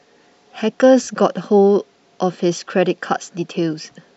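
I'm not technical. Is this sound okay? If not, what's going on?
No. There is a short glitch from about 1.03 to 1.07 seconds. It lasts about 40 milliseconds. This is a case of lost LE Audio frames. The speech likely travels over a Bluetooth link, which sends sound in small chunks. A few chunks went missing here, which fits four chunks of 10 milliseconds each. The receiver filled the gap by guessing from the last chunk it had. So the speech turns into a brief noisy smear.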